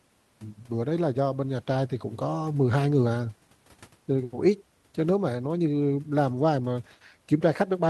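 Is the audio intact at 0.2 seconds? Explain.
Yes, at 0.2 seconds the audio is intact, with only the room's own background noise, about 38 dB below the speech, present there.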